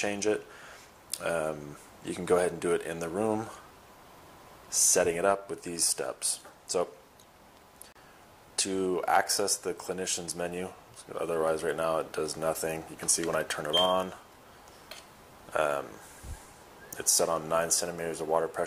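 Two separately encoded pieces were joined without trimming the encoder's start-up delay or the padding on the last frame, leaving a gap at a join of encoded pieces from 7.92 to 7.96 s. The sound cuts out for about 32 ms, a short hole with edges smeared by the codec, and then resumes exactly where it left off, so nothing is lost, only interrupted.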